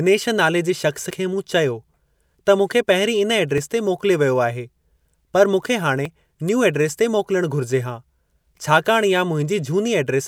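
At 3.58 s and again at 6.05 s, just after "पर मूंखे", the speech skips forward, losing about 30 ms and joining both sides with no gap. This is audio missing between chunks, likely from a recorder dropping a sliver at each 2.5 s chunk boundary.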